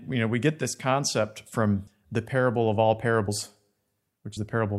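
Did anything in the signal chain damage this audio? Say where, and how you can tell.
Yes. The damage is at the codec stage: compressed frames skipped. At 1.87 s, between "get this concept from" and "the parable of all", the speech jumps ahead by about 150 ms. It jumps again at 3.28 s, just after "the parable of all", and at 4.37 s by about 70 ms. That fits whole 32 ms frames going missing.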